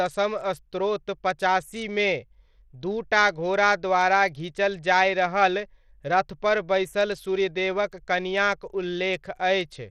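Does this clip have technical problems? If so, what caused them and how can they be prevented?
Yes. Bluetooth SBC compression damage runs throughout the speech. The treble thins and flickers, and gritty noise and aliasing ride on the voice. The likely cause is a small SBC bit pool, consistent with a bitrate around 80 kbps, which starves the upper sub-bands and coarsely quantises the rest. To prevent it, record over a wired connection or a higher-quality Bluetooth codec instead of a low-rate SBC link.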